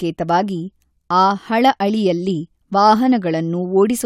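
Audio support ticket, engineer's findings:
Speech signal checked and found technically intact, with nothing to flag in the recording or playback path.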